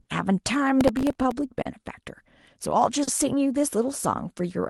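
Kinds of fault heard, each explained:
Clock drift between sender and receiver: throughout, the sender's clock runs roughly 3% slow, so the receiver's buffer keeps draining and it repeats short slices, causing irregular timing hiccups in the speech.
Short stall from a late packet: at 0.01–0.08, 1.61–1.68 and 3.03–3.10 s, a late packet emptied the jitter buffer, so the last sound is held about 40 ms with nothing lost.
Processor overload crackle: from 0.81 to 1.39 s, a string of missed deadlines on very short buffers (about 20) replays fragments of old audio with hard edges, giving gritty crackle.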